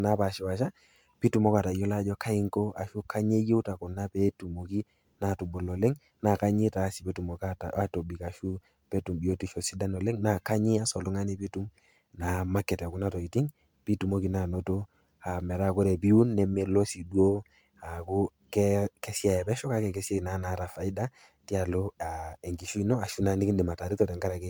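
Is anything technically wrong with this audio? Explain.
Yes. Throughout the speech there is generation loss: a swirly, hollow, smeared quality with blurred consonant attacks. It likely comes from MP3 encoding repeated about four times near 135 kbit/s, each pass requantising on a shifted frame grid, compounding noise and spectral holes below the 20.1 kHz ceiling.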